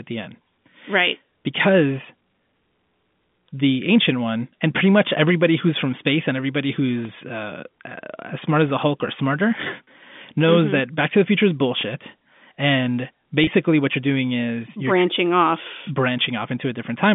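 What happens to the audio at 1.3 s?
Nothing goes wrong at 1.3 s: the speech carries on intact through that moment, heard through the usual narrow G.711 telephone band.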